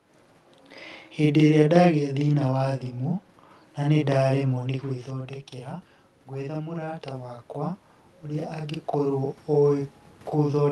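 From the start and throughout, a channel delay produces audible doubling. One channel arrives about 46 ms late, which fits a 2048-sample buffer, and when the two are summed to mono the late copy sits at equal level as a short slap echo behind every syllable.

From 3.94 s to the end, automatic gain rising is audible. After the talker moves away around 4.5 s, the input falls by about 11 dB, and the gain control slowly lifts its gain to compensate, so the voice and room noise swell back up together over the following seconds.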